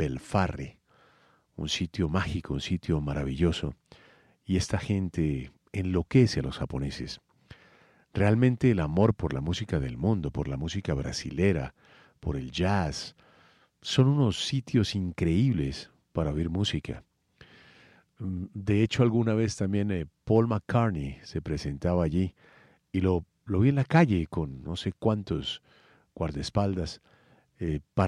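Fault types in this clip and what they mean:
Nothing to flag here, since no faults turn up anywhere in this speech recording.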